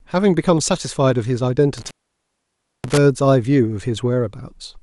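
From the start the speech has a dull, gurgling, granular texture, and the likely cause is MP2 compression at a low rate, something in the region of 80 kbps. Layer II chops the spectrum into 32 equal sub-bands and shares out a fixed bit budget. When that budget is tight, the upper bands get switched off altogether and the rest are quantised coarsely. That's why the top end sounds missing and flickery, with that watery low-rate digital radio character running under everything.

Between about 1.77 and 2.98 s there's an intermittent contact fault, the kind of thing you get from a loose plug or a tired cable. The connection opens and the speech drops out for roughly 0.93 s, with crackle at the break and again where it reconnects. While the line is open you're left with just a faint hiss instead of signal, before the sound snaps back in.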